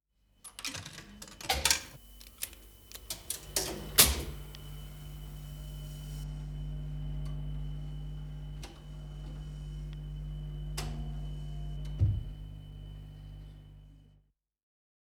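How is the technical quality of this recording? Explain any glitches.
The recording has one clear fault, confined to a stretch near the start. From 1.64 to 6.24 s there is pre-emphasis left on. A treble boost matching the FM 75 µs curve was applied without the complementary de-emphasis, lifting 10 kHz about 14 dB above 1 kHz. The sound turns thin, bright and hissy, and a spectrogram shows a markedly denser, brighter upper band for that span.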